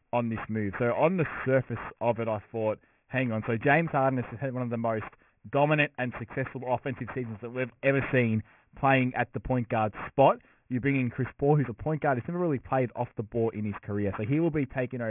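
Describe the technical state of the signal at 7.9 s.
At 7.9 s the speech sounds gritty and metallic, with sibilants smeared into false tones. This aliasing runs throughout the clip: a drop from 44.1 kHz to 6 kHz without filtering folds content above 3 kHz back down, fairly strongly.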